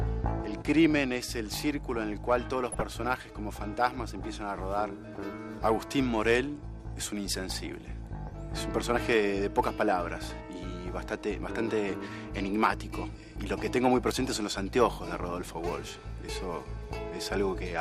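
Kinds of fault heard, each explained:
MP2 compression: a dull, band-limited sound with granular, gurgling distortion runs through the whole clip, likely from MPEG Layer II coding at about 80 kbps. Unlike brief error bursts, this is steady: starved upper sub-bands drop out and flicker, and the remaining bands are coarsely quantised.
DAB burbling: from 2.72 to 2.82 s a short burst of noise blips breaks over the sound, consistent with 4 corrupted frames from a bit error rate of about 0.3%. Unlike the constant codec dullness, it is a sudden burst of short noise blips in single sub-bands.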